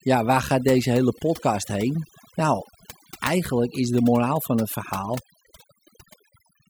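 From start to finish, overdone noise removal is at work: the noise reduction was set too aggressively, so frequency bands near its noise estimate are pulled down or muted. Quieter speech detail vanishes with them, leaving near-silent gaps flecked with twinkling specks.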